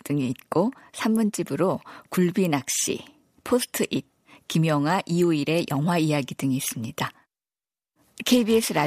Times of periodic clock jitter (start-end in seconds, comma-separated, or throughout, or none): 7.08-8.87